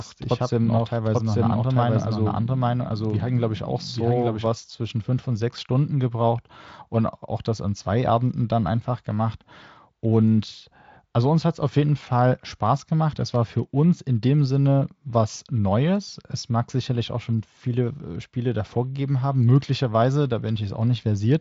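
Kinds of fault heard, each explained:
doubled audio track: A second full-band copy of the speech, at about the same level, runs roughly a second behind the original from the start until 4.46 s, then stops abruptly. A likely cause is a second capture path or a misaligned edit. On a spectrogram the speech patterns repeat, offset sideways.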